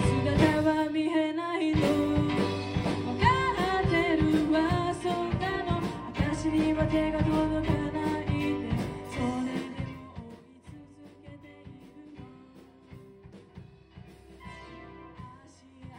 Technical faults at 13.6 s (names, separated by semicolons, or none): none